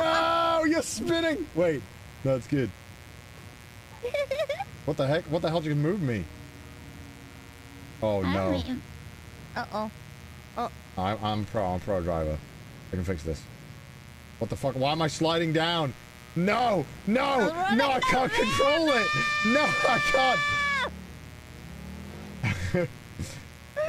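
A mains buzz runs through the whole clip, from the first moment to the last. It is a steady, raspy drone sitting under the sound. It never changes. The buzz is built on 60 Hz mains. Sharp switching spikes from a dimmer, rectifier or poorly shielded line get into the signal twice per cycle. That spreads energy across many harmonics, up into the kilohertz range. The buzz sits roughly 25 dB below the wanted signal.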